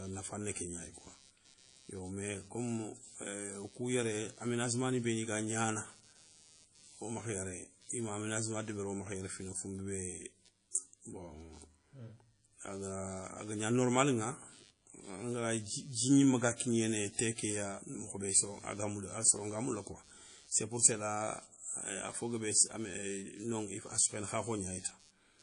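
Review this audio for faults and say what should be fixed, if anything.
Computer activity noise runs through the whole clip: a buzzing, chirping layer pulsing around 150 times a second, roughly 30 dB below the speech. Changing load on the processor, graphics card or mouse shifts the ground the audio circuit shares, and that movement leaks into the signal. Unlike steady mains hum, it rises and falls with what the computer is doing rather than holding one tone, and it ignores the speech entirely. A ground-isolated or external USB interface, kept away from the computer's internal ground, would prevent it.

Throughout the recording, the speech carries plainly audible codec damage, and nothing remains above 10.1 kHz. The likely cause is WMA compression at a low bitrate, around 32 kbps. A transform codec like this quantises the signal in blocks, so its noise smears across tens of milliseconds and weak spectral detail is discarded. 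The damage follows the speech, which sets it apart from a constant background hiss, and the hard ceiling at 10.1 kHz sets it apart from an ordinary dull microphone. Keeping a lossless or high-bitrate master would prevent it.

Pre-echo appears from 10.71 to 10.74 s as a short hiss of about 30 ms arriving just ahead of a sharp attack, which sounds softened. The codec spreads its quantisation noise evenly over a whole block, so when a loud onset falls late in that block, noise sized for the loud part also fills the quiet moment before it. Room echo or reverb follows a sound, while this smear comes before the attack. A codec with shorter blocks for transients, or a higher bitrate, would prevent it.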